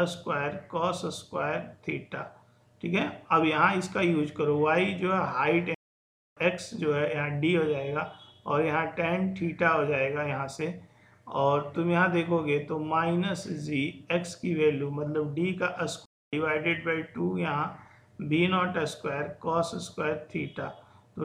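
Playback stalls at 5.74–6.37 s (about 0.62 s) and 16.05–16.33 s (about 0.27 s) cut the audio to silence mid-flow, likely because the player ran dry of buffered data or its thread was blocked.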